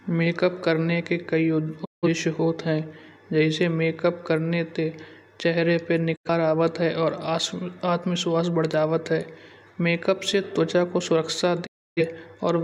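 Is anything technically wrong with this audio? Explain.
Yes. The speech has three digital broadcast dropouts: 1.84–2.08 s, 6.15–6.30 s (after "करने ते चेहरे पर", before "आवत है और"), and 11.65–12.02 s (after "से त्वचा को सुरक्षा"). The receiver lost frames and muted. Sound fades out over 20 ms. Then there is silence of about 170, 85 and 300 ms. That audio is lost.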